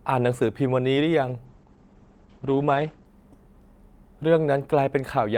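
From 1.47 s to 3.13 s there is a call bitrate drop. The encoder starved of bits, which fits a fall from about 40 kbps to 11 kbps. Treble cuts off near 8 kHz instead of 20 kHz, and for about 1.6 s the sound turns coarse and watery. Unlike a plain filter, the texture degrades too, then recovers.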